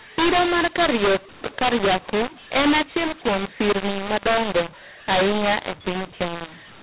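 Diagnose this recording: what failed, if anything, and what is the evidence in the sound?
A mu-law and A-law mix-up at the codec stage runs through the whole recording. The 8 kHz G.711 telephone coding itself caps the speech at 4 kHz as expected, but the stream was encoded as A-law and then decoded as mu-law. The two companding curves disagree, so sample magnitudes are remapped wrongly. Some come out too loud and others too quiet, which gives constant harsh distortion. Near-zero samples decode well above silence, so pauses fill with noise.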